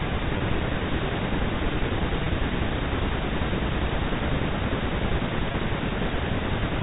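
Packet loss with pitch repetition occurs at 0.38 s, 2.24 s and 5.52 s. Each gap lasts 20 ms, which fits one lost packet. The receiver bridges it by repeating the last pitch period, so the speech briefly holds on a slightly buzzy tone before resuming.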